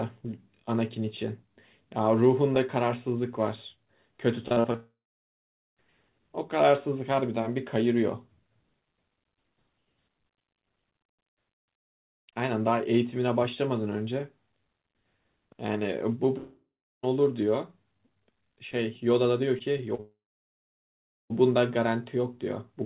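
Repeated packet loss (robotic sound) begins at 4.48 s and runs to 4.76 s. Four short gaps, the longest 38 ms, are each patched by stretching the sound just before them, so nearly half that stretch is synthetic fill. The result is choppy and metallic, with small pieces missing. The same pattern returns from 19.59 s to 20.00 s, again with four gaps of up to 36 ms, but only about a fifth of the span is filled, so it sounds less broken.

Each burst leads straight into a long network dropout, likely a stall in the incoming stream. From 4.76 s to 5.78 s about a second of audio is lost. A brief fading buzz continues the last sound, then roughly 0.8 s of silence follows before the audio resumes further on. At 16.38 s to 17.05 s about 0.66 s goes missing, with around 0.4 s of it silent. From 20.00 s to 21.32 s about 1.3 s disappears, and around 1.1 s of that is silent. All of this passes through a narrowband call path, the audio band-limited to 4 kHz as G.711 mu-law would leave it.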